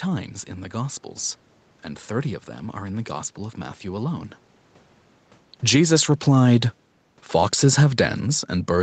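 The speech, along with the background behind it, dips by about 6 dB between 5.53 and 5.92 s. This is automatic gain falling: the automatic gain control judged the input too loud and pulled its gain down over roughly 0.4 s, lowering everything together.

Almost immediately, from 5.86 to 6.66 s, voice and room noise swell back up by about 3 dB. This is automatic gain rising, as the control found the level too quiet and raised its gain across about 0.8 s, so the background breathes along with the voice.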